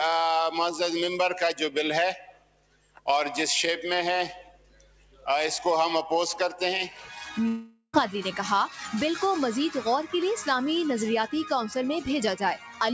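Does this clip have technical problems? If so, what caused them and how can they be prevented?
Yes. A noise suppressor applied to music or sounds is active throughout. A suppressor built for speech treats sustained tones and decays as noise, so the level swings by around 10 dB. Sharp attacks pass while held parts sink. This pumping follows the sound's own envelope, unlike steady codec noise. Disabling noise suppression for non-speech content prevents it.

The suppressor also cut specific sounds: 2.14–3.07 s (about 18 dB down), 4.39–5.27 s (about 13 dB), 6.9–7.1 s (about 7 dB) and 12.56–12.80 s (about 10 dB). Here a sound sinks in level or its decay is cut short rather than lost, and the attack survives, which tells it apart from a dropout. Turning the suppressor off avoids it.

From 7.48 to 7.95 s there is a long network dropout, likely from lost packets. Roughly 0.46 s of audio is missing. 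The receiver stretches the last sound into a fading buzz or hiss, then about 90 ms of silence, and the audio resumes further along. That fabricated tail distinguishes it from suppression. A more stable connection or larger jitter buffer prevents it.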